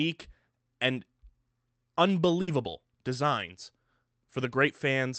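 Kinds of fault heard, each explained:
Burst of packet loss: From 2.41 to 2.49 s the speech stops being fresh. For about 60 ms the receiver keeps the last sound going and lets it fade, then jumps ahead, so roughly 60 ms of speech never arrives. Unlike a plain dropout to silence or a sharp click, the gap is papered over by this concealment, and the resumed speech sits on the Opus call path's 8 kHz bandwidth.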